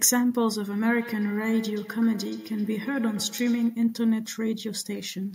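Feedback echo between two devices runs from 0.72 to 3.83 s: a second device in the room replays the speech, its microphone recaptures it, and neither echo canceller removes the other's output. The speech returns roughly every 150 ms, thinner and ringing, peaking about 16 dB below the direct speech.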